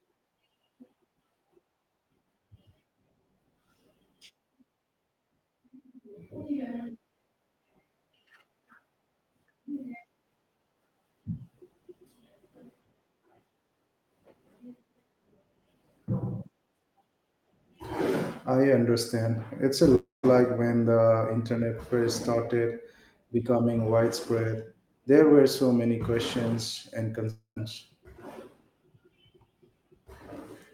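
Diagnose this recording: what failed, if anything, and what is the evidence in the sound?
Network stage, likely a long network dropout: at 19.95–20.25 s and 27.30–27.58 s the sound continues as a fading buzz or hiss, then silence. On a spectrogram, smeared harmonics dissolve into a blank band.

Network stage, short concealed packet loss: about 20 ms of audio went missing at 27.15–27.18 s and the decoder bridged it by extrapolation, producing a brief smear.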